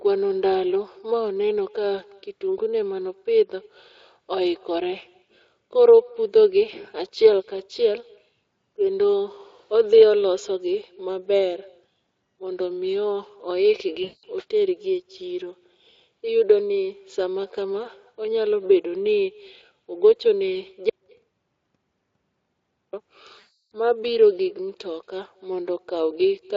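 Throughout the speech, an echo with no canceller returns each phrase around a fifth of a second later, about 28 dB below the original, as a faint, thin shadow. At 14.03 to 14.26 s and 23.39 to 23.71 s, VoIP packet loss concealed by the speech codec covers roughly 200 ms and 320 ms of missing audio. The decoder extends the last sound into a fading buzzy tone or coloured noise, and the speech stays weak briefly afterward. From 20.90 to 22.93 s, an audio dropout to silence cuts the sound to silence for about 2.03 s with no room tone. The likely cause is a lost input or link.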